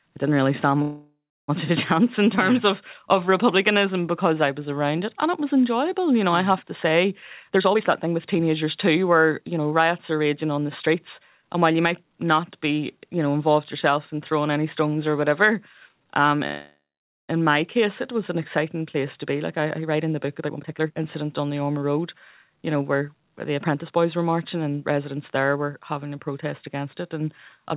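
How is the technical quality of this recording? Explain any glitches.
Fair but flawed: the speech is band-limited to nothing above 4 kHz, which fits a G.711 A-law call path, and there are two kinds of glitch.

Call audio freeze at 0.82–1.50 s (after "I didn't really stand", before "of a") and 16.47–17.31 s. The likely cause is delayed packets emptying the jitter buffer. The last sound is stretched into a fading buzz and then about 0.3 s and 0.5 s of silence, with nothing lost. A spectrogram shows a smeared band that fades to a blank gap.

Jitter buffer speed-up at 7.43–12.04 s (after "I have to say", before "not be you know") and 19.59–24.06 s (before "were marching and residents"). Repeated pitch-period cuts, roughly 0.7 s in total each time, make the speech run at 114% and 118% speed at unchanged pitch, so it sounds hurried. The waveform appears compressed in time, with harmonic spacing unchanged.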